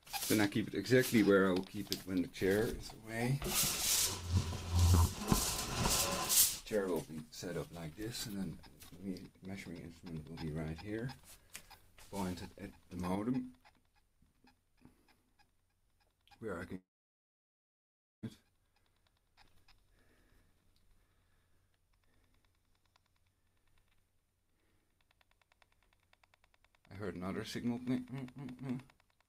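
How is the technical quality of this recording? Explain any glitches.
The recording has two clear problems: a lasting level drop partway through, and a gap of roughly a second and a half a few seconds later.

From 13.15 s to the end, the sound abruptly becomes about 6 dB quieter and stays there. This is likely one channel dropping out. When a stereo signal is summed to mono and one side goes missing, material shared by both channels loses half its contribution, which is about 6 dB, and anything present only in the lost side vanishes.

From 16.75 s to 18.25 s, the sound cuts out. A brief fading buzz or hiss carries on from the last sound, then about 1.4 s of silence follows, and the audio resumes with about 1.48 s of material skipped. This is likely a long network dropout. No packets arrived, so the receiver extended the final sound briefly, fell to silence, and picked up later without replaying the lost stretch.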